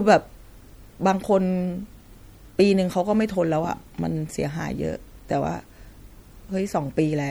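Throughout the speech, sibilants turn swirly and watery, and onsets smear, likely from MP3 compression at a rate that fits about 64 kbps. Unlike a plain low-pass, the faint detail flickers in and out between frames, giving metallic chirps.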